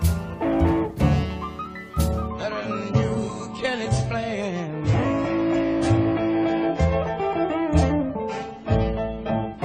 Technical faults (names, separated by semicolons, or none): adaptive stream at a lower bitrate